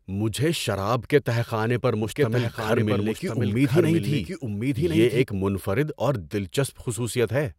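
Right after "کے تہہ خانے پر", at 2.04 s, a doubled audio track kicks in and runs to 5.22 s, just before "منفرد اور". A second full-band copy of the speech trails the original by about a second, sitting roughly 5 dB lower, with no reverb tail or room colour. It sounds like a dry, flat echo that starts and stops abruptly. The likely cause is the signal being picked up again through a slower path.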